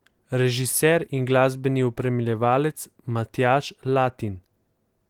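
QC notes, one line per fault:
No faults found in this speech clip.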